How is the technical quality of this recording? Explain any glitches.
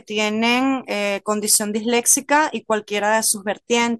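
Three bursts of crackle break up the speech, the result of hard clipping. At 1.50–1.56 s and 1.97–2.40 s, peaks overshoot by about 4 and 5 dB, with a brief repeat near 3.73–3.77 s (about 1 dB). The overloaded stage flattened waveform tops, adding high harmonics.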